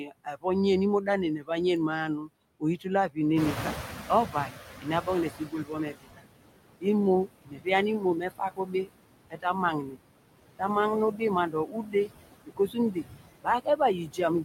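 Throughout the recording, noise suppressor artifacts pull the steady background down by about 21 dB frame by frame. On a spectrogram the noise floor looks patchy and speckled.

Speech cut by the noise suppressor occurs at 0.0–0.45 s, 1.05–1.5 s, 2.2–3.64 s, 4.27–6.25 s, 6.81–9.98 s and from 10.57 s to the end. Soft consonants and word endings are mistaken for noise and dropped by up to about 16–22 dB, so they sound swallowed. On the waveform the tails look clipped short, and the spectrogram shows faint high-frequency consonant energy.

The room noise jumps by about 12 dB near 3.5 s and sits about 9 dB below the speech. The noise suppressor catching up lags this change from 3.36 s to 5.94 s. Its estimate takes 2.58 s to adapt, so the noise comes through loud at first and then sinks by about 15 dB. On the spectrogram this appears as a bright band that fades gradually.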